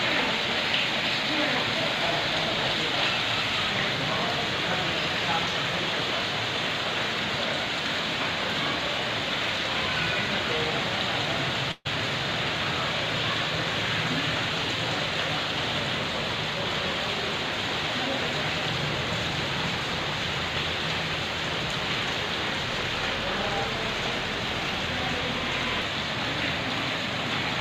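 Packets were likely held up in transit at 11.71 s, emptying the jitter buffer and causing a call audio freeze until 11.87 s. The last sound is stretched into a fading buzz or hiss for about 138 ms, with a brief 10 ms silence, then resumes where it stopped, now running 138 ms late.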